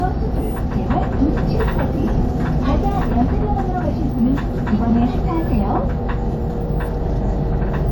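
Throughout, layered smearing and swirly artefacts with nothing above 18.5 kHz fit transcoding between lossy codecs, likely WMA at around 96 kbit/s re-encoded as HE-AAC near 40 kbit/s.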